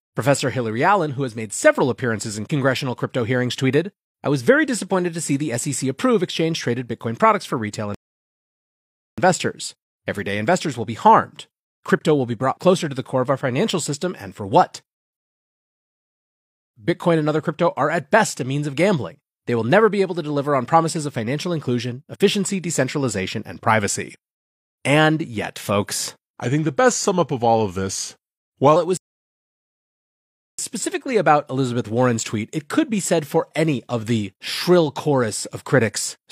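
A speech recording in which the talk cuts to dead silence three times and then picks up exactly where it left off: at 7.94 s just after "products for retail", at 15.17 s, and at 28.97 s, resuming right before "specifically about". These are rebuffering stalls. Playback ran dry and waited for more data, adding about 1.23 s, 1.57 s and 1.61 s without losing anything. From 26.41 to 28.76 s, after "yet folks", the speech turns slow and deep, dropping roughly two semitones. This section at the wrong speed plays at 0.893 times normal, likely from being fitted to the wrong clock.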